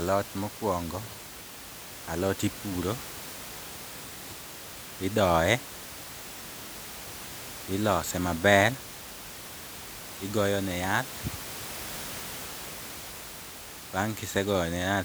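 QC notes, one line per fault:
No faults heard.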